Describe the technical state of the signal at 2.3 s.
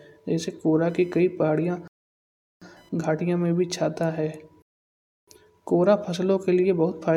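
At 2.3 s the speech has stopped dead in a silence that runs from 1.88 to 2.62 s, then resumes exactly where it left off. This is a rebuffering stall: the player ran out of downloaded audio and waited for more, adding 0.74 s without losing anything.

Under that gap, and from 0.89 to 3.63 s overall, a faint buzzy chirping pulses at roughly 1 kHz, about 40 dB below the speech. This is computer activity noise: processor or graphics load shifts the shared ground of the audio circuit, so the noise follows the machine's activity rather than the speech.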